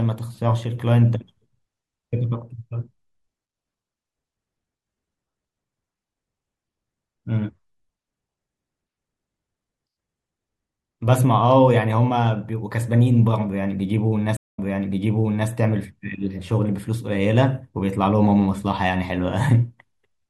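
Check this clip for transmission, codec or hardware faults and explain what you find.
One transmission fault stands out: a stream reconnect from 14.37 to 15.49 s. The connection dropped, leaving 142 ms of silence, then a fresh decoder picked up a resent burst, so the speech resumes about 0.98 s earlier and a short stretch repeats. The first frame or two come back muted or faded in. On a waveform this is a flat gap followed by a ramping envelope, and on a spectrogram a blank vertical band before a repeated stretch of the same patterns.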